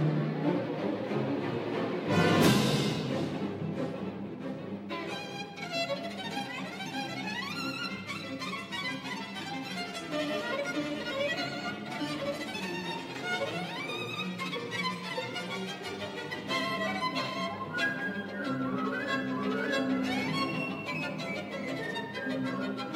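No technical faults can be heard in the audio.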